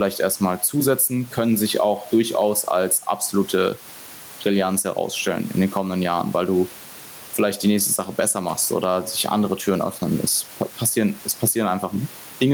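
Gain pumping runs through the whole recording, with a gain swing of around 10 dB. The likely cause is input gain set far too high, with a fast limiter or compressor clamping down on each loud syllable and releasing in the gaps. The room noise sits about 29 dB below the speech, and the speech itself sounds flattened and squashed.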